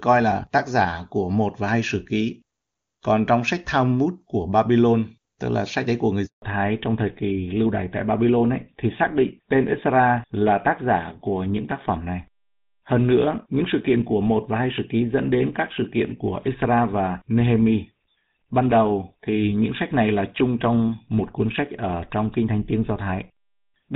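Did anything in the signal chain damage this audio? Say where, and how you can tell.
Yes, in the network stage. A handover gap runs from 6.26 to 6.42 s: while the call moved between networks, no speech frames arrived for 160 ms. The speech fades out within a few tens of milliseconds and stays silent until the new link delivers audio.

After the handover, at 6.42 s, comes a fallback to narrowband that lasts to the end. Before the gap the HD Voice wideband codec carried content above 4 kHz. From 6.42 s nothing above 4 kHz remains, which fits a switch to an older narrowband codec such as GSM full rate. The speech turns duller and rougher.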